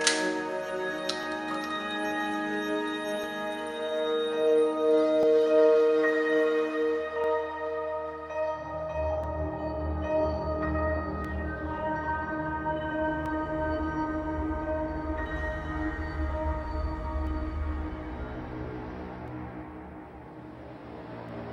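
Periodic USB or driver dropouts run through this audio from 1.23 s to 21.29 s, recurring every 2.0 s for about ten events in all. Each time, something on the system stalls the USB link or the audio driver. A brief slice of roughly 2 ms never arrives and is replaced by silence, so the waveform is cut off and resumes abruptly. Because of the fixed spacing, this is heard as a steady, clock-like tick wherever sound is present.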